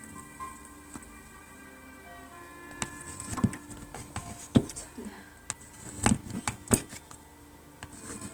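Opus compression runs throughout this recording of sounds, which is plainly grainy and rough. The likely cause is Opus in its music mode, where starved bands are filled with folded or noise-like content. The full bandwidth survives, which fits a bitrate around 24 kbps.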